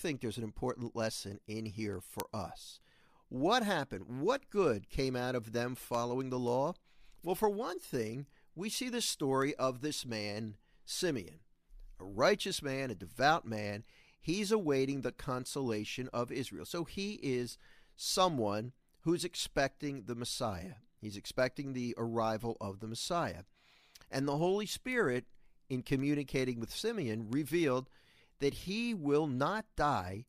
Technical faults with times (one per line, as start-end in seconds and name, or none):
0.33-30.27 word clock ticks